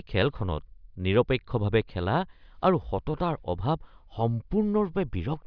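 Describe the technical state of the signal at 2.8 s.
At 2.8 s the speech signal is intact, with no dropout, distortion, glitch or other fault audible at that moment.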